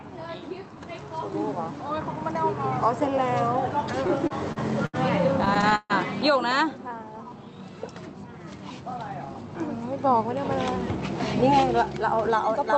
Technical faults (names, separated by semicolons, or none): repeated stalls (stutter); jitter buffer slow-down; jitter buffer speed-up